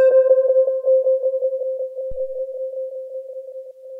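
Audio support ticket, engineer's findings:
Phantom power thump at 2.12–2.51 s. Deep low-frequency thump, peak about -21 dBFS, decaying over roughly 89 ms. Supply switched on or off on a live input. Voltage step passed through the coupling capacitors.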